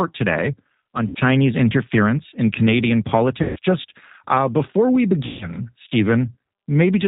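The speech was encoded with a G.729 codec, which fits an 8 kbit/s stream, and the damage is plainly audible across the clip. The codec models the voice with a vocal tract filter and a pitch predictor excited by a few pulses per frame, and it discards everything above 4 kHz. The result is a band-limited, slightly rough and synthetic voice, with a coarse texture in place of natural breath and detail.

At 1.08 to 1.19 s, 3.42 to 3.59 s and 5.26 to 5.48 s, VoIP packet loss concealed by the speech codec occurs. Packets went missing, and the decoder filled the gaps by extending its last pitch and filter settings at falling gain. Each gap, lasting about 0.11 s, 0.17 s and 0.23 s respectively, becomes a stretched buzzy tone or coloured noise that fades. Because each frame builds on the one before, the voice stays weak and distorted briefly after each gap.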